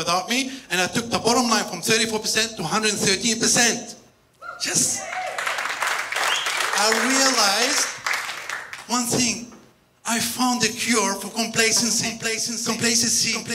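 A second copy of the audio was likely picked up through a slower capture path, or an edit left two copies out of step. The result is a doubled audio track from 11.76 s to the end: a full-band repeat roughly 0.7 s behind and about 5 dB quieter, with no decay or room colour, starting abruptly.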